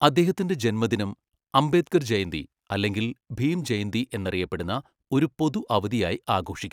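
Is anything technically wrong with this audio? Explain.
No, nothing technical stands out here; the speech comes across without any fault worth flagging.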